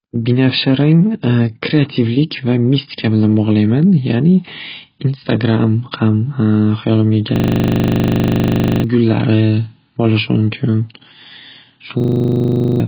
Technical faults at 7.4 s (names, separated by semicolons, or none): AAC compression; system hang loop